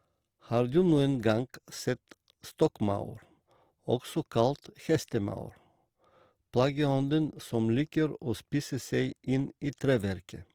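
Opus compression runs throughout the speech, from start to finish. The sound is plainly grainy and rough, with a noisy edge on voiced sounds. This is likely the music (CELT) mode at full bandwidth running short of bits, a rate around 24 kbps, so bands are filled with noise or folded copies.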